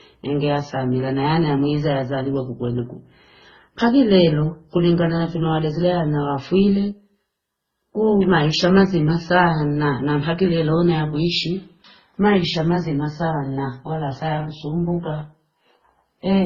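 Throughout the speech, nothing sounds above 6.9 kHz, and swirly, smeared artefacts of mixed character overlap. A spectrogram shows a flat ceiling at 6.9 kHz with blotchy detail beneath. This is likely transcoding between lossy codecs, with a low-bitrate early stage's cut-off surviving later encodes.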